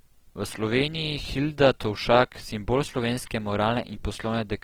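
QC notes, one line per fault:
Throughout, Opus compression: speech turns grainy and rough, as if starved bands got filled with noise, likely Opus music mode at something like 16 kbps.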